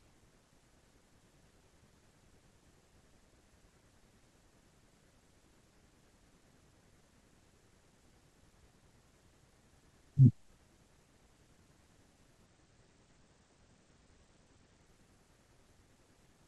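A Bluetooth SBC bit pool drop runs from 12.46 to 14.86 s of this speech clip. The link appears to have become congested, and the encoder cut its bit allocation sharply, from a bit pool around 28 down to one near 10, which fits a stream of roughly 84 kbps. With so few bits, the upper sub-bands are starved and the lower ones coarsely quantised, so the treble goes dull and a gritty noise rides over the sound until the rate recovers.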